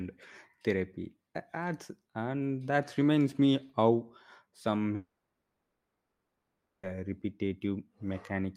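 Right after "reminds me how some", at 4.95 s, the speech cuts out until 6.85 s, likely a long network dropout. The last sound smears into a fading buzz, then about 1.55 s of silence follows. Speech returns with those 1.9 s gone, not merely glitched.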